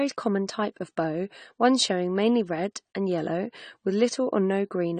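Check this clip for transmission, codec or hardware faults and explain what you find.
One codec fault is present, and it runs throughout. The speech is band-limited, with nothing above 9 kHz, and compression damage is plainly audible. The likely cause is AAC compression, AAC-LC at a low bitrate, which fits roughly 32 kbps. With few bits, the encoder drops the top of the spectrum and quantises the remaining bands coarsely. The sound is dull and smeared. Sibilants turn fizzy, and sustained vowels take on a warble.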